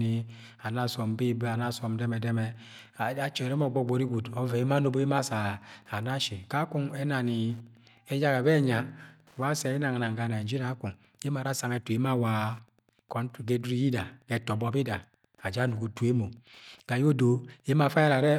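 Throughout the speech, Wi-Fi interference ticks faintly, well below the voice, every 102.4 ms, showing as evenly spaced thin vertical lines across the spectrogram.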